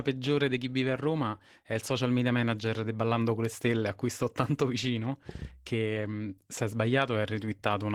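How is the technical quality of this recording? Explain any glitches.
The recording is compromised by low-rate codec damage running the whole way through. Opus voice compression throughout: the speech was squeezed hard enough to fit roughly 16 kbps in 20 ms frames, with SILK coding the lower band and CELT the top. The coarse excitation leaves the voice plainly hoarse and slightly robotic despite full bandwidth.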